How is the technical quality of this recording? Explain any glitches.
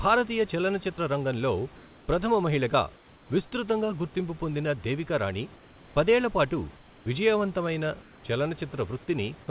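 The recording shows several brief voice-detector glitches on a narrowband call line, with nothing above 4 kHz, which fits G.711 at 64 kbps.

Sound dropped by the voice detector, 0.96 to 0.98 s: a 20 ms stretch gives way to smooth noise, losing about 10 ms of speech, likely because the detector briefly judged it background.

Comfort noise in place of the background at 2.96 to 3.30 s (before "విస్తృతంగా గుర్తింపు పొందిన దేవికా"), 6.76 to 7.06 s (after "దేవికా రాణి పదేళ్ల పాటు") and 8.02 to 8.24 s: the real room noise, about 27 dB below the speech, turns into flat synthetic hiss about 2 to 3 dB quieter. This is likely because transmission paused during silence and the receiver filled the gap.

Onset clipped by the voice detector, 7.04 to 7.06 s, right after "దేవికా రాణి పదేళ్ల పాటు": the next word starts abruptly, its first 20 ms replaced by noise, likely because the detector reacted late.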